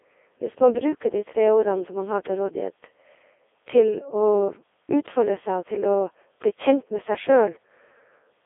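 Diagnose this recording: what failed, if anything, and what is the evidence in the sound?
The failure is at the codec stage: the whole clip has passed through a Codec 2 vocoder. Throughout, the speech sounds robotic and buzzy, confined to roughly 300 Hz to 3.5 kHz with nothing above 3.8 kHz, and the damage is heavy, even at Codec 2's highest 3.2 kbit/s mode. The decoder rebuilds the voice from sine waves using only pitch, voicing, energy and a spectral envelope. A spectrogram would show unnaturally regular harmonic lines, coarse formants and a hard ceiling, and the waveform would not resemble the original.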